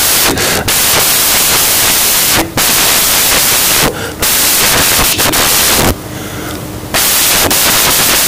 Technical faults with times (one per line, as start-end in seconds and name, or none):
0.00-8.27 samples built from the wrong bytes